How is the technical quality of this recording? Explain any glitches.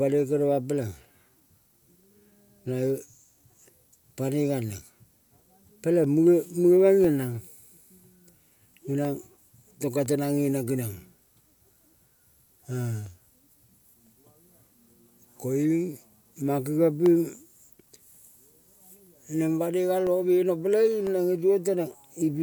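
The recording has periodic USB or driver dropouts. From 1.03 s to 22.07 s, once every second, roughly a millisecond of speech drops to silence. Something is stalling the USB bus or audio driver on a fixed schedule, so you hear regular small ticks whenever speech is present.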